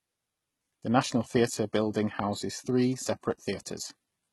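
Heavy HE-AAC compression is the likely cause: only the lower spectrum is coded and the treble is rebuilt from copied bands, pointing to a bitrate near 16 kbps. Throughout the speech, s sounds turn gritty and lispy, with a metallic, misaligned top end.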